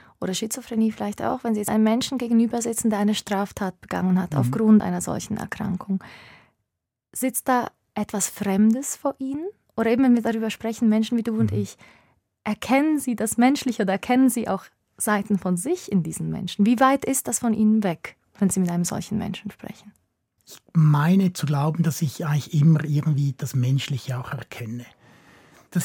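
At 1.68 s and again at 4.80 s the speech jumps abruptly forward, with no gap of silence between what comes before and after. Each time roughly 40 ms of sound goes missing and the two sides are butted together. This is likely a dropped buffer (overrun): the recording program did not collect its samples before the hardware overwrote them, so that stretch of audio was never captured and the stream simply skipped ahead.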